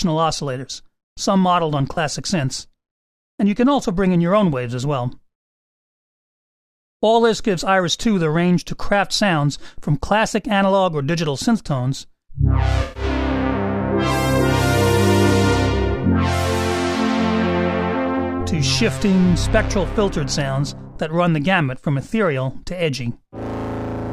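AAC frame loss with concealment: at 1.95 to 1.97 s and 12.83 to 13.03 s, the decoder patched missing frames from earlier spectrum, leaving smeared, blurred spectrogram columns.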